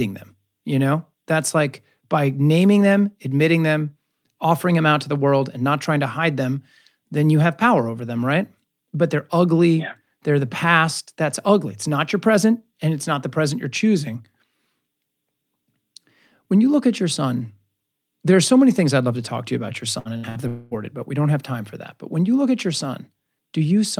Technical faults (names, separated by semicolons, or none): burst of packet loss; long network dropout